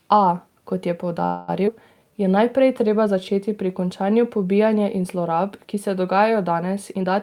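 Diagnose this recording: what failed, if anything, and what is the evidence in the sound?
Call audio freeze, network stage: from 1.25 to 1.50 s the speech stalls into a fading buzz for about 230 ms, then resumes intact, likely from delayed packets draining the jitter buffer.

Skip ahead, network or jitter buffer: at 1.66 to 1.69 s playback jumps forward, dropping roughly 70 ms of speech, with the two sides joined almost directly.

Jitter buffer slow-down, buffer stage: from 1.76 to 2.13 s the speech runs at 89% speed with unchanged pitch, stretched by 50 ms of repeated pitch periods to rebuild reserve.

Jitter buffer speed-up, buffer stage: from 6.94 to 7.11 s the speech runs at 141% speed and sounds hurried, with roughly 70 ms of pitch periods removed to cut delay.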